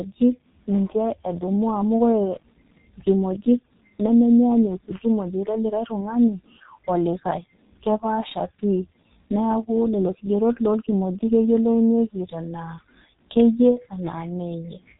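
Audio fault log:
Throughout, G.723.1 codec: nothing above 3.8 kHz, with hoarse, smeared consonants from its slow 30 ms frame updates, unlike a plain low-pass, and heavy damage that fits about 6 kbit/s.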